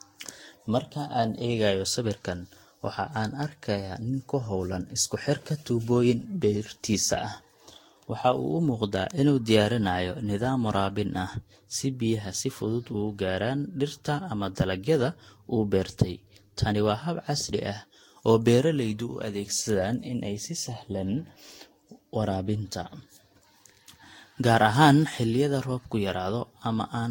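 Speech, with generation loss throughout: the sound is swirly, smeared and hollow, attacks are blurred, and nothing remains above 16.6 kHz. This likely comes from about four successive lossy passes, consistent with Vorbis near 64 kbit/s, each requantising on a shifted frame grid.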